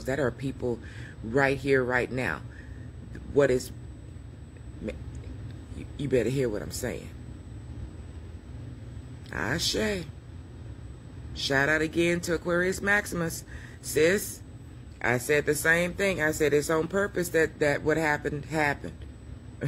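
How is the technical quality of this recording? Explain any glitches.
A thin, steady whine at 8 kHz sits under the sound throughout, roughly 40 dB below it. This is USB whine: the bus's 125-microsecond microframe current draw leaks through power or ground.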